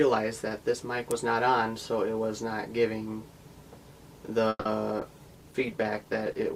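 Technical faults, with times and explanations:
1.11 s, electrical switching spike. A single sharp snap sits on top of the sound. It lasts only about 5 ms. The likely cause is a nearby switch or discharge arcing briefly. The audio line picked up that burst as a click.
4.49 to 4.66 s, call audio freeze. The sound stalls and is stretched into a fading buzz or hiss for 160 ms, ending in about 30 ms of silence. Packets were likely held up in transit. The jitter buffer ran dry. Playback then resumes where it stopped, so nothing is lost but everything after is 160 ms late.
5.0 s to the end, call bitrate drop. The encoder rate falls from 64 to 19 kbps. It stays at that low rate for about 1.46 s. With far fewer bits, the codec describes the sound more coarsely. The result turns rough, watery or muffled.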